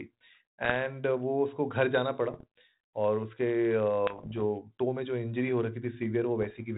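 Speech carried over a band-limited ADPCM link, consistent with 32 kbit/s G.726, shows four bursts of bit errors on the ADPCM link: 0.65–0.72 s, 2.32–2.44 s, 4.07–4.43 s and 6.42–6.60 s. Each burst brings pops, rough crackle and brief level jumps. At an error rate of around half a percent, each flipped bit corrupts the decoder's step size and predictor, so the damage rings on for milliseconds. The longest patch is the one around 4.1–4.4 s.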